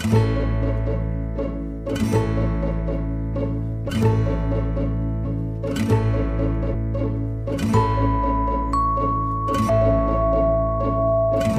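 Whole compressed frames skipped by the decoder, because they were missing or rejected as damaged, make the audio jump ahead at 3.88, 5.24, 6.73 and 9.68 s. Each jump drops roughly 0.1 to 0.15 s, consistent with several 26.1 ms frames.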